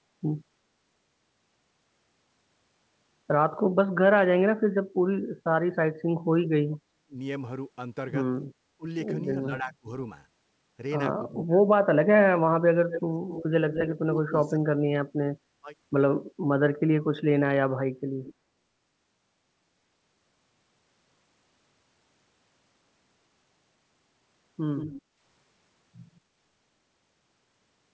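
From 6.32 to 7.18 s the speech drops out, at its deepest by about 40 dB, for roughly 0.7 s in total. It happens again from 8.77 to 9.89 s, by about 30 dB for under half a second, and from 11.3 to 15.7 s, by about 35 dB across roughly 2 s. This is speech suppressed in double talk. The likely cause is an echo canceller that heard both ends at once, could not tell its own talker from the returning loudspeaker signal, and attenuated both.

Inside that last stretch, from 12.94 to 14.5 s, an echo leak appears: a copy of the sound delayed by 235 ms and only about 5 dB below the direct speech. Shorter leaks follow, each delayed by 172 ms. At 18.24 to 18.34 s the echo is about 20 dB down, at 24.77 to 25.02 s about 15 dB down, and at 26.15 s it is around 40 dB down. These are likely residual echo that the far-end canceller failed to remove from its microphone feed.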